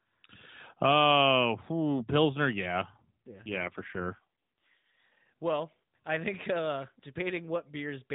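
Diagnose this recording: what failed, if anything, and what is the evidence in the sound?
The failure is an AMR rate drop at the codec stage, driven by the network, from 2.98 to 5.00 s. Through that span the speech turns rougher, buzzier and more synthetic, then returns to the lightly coded narrowband quality of the rest of the clip. That sound fits the link forcing AMR-NB down from its 12.2 kbps mode to around 4.75 kbps, so fewer bits describe the vocal tract and its pulse excitation. It is not packet loss: nothing drops out, and the band stays capped at 4 kHz throughout.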